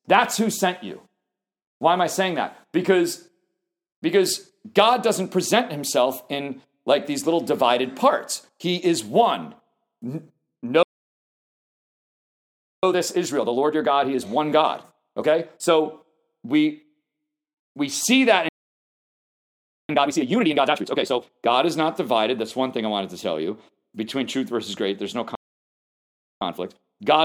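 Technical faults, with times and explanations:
10.83 to 12.83 s, 18.49 to 19.89 s and 25.35 to 26.41 s: playback stall. The sound halts mid-flow for about 2.0 s, 1.4 s and 1.06 s, likely because the player's buffer ran dry or its thread was blocked. On a waveform each gap is a flat line, and on a spectrogram a blank vertical band with abrupt edges.
12.83 to 15.83 s, 19.89 to 21.29 s and 26.41 to 27.25 s: time-compressed catch-up. After each stall the player clears its backlog by cutting and cross-fading short segments, running at 1.25×, 2.0× and 1.1× speed. Pitch is unchanged but the sound is hurried. A spectrogram shows squeezed events with faint seams at the splices.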